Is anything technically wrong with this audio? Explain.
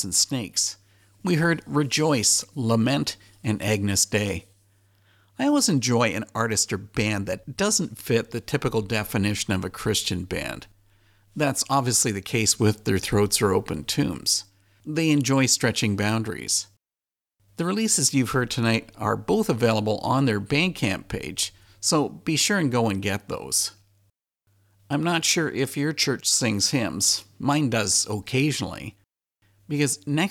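No, nothing technically wrong is audible in this speech.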